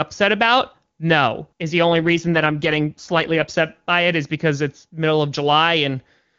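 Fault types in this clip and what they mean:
AMR rate drop: From 1.87 to 3.54 s, ending just before "by it is because", the speech turns rough and synthetic with no gap or loss of bandwidth. This fits the network pushing AMR-WB from its clear 23.85 kbit/s mode down to about 8.85 kbit/s to protect against errors.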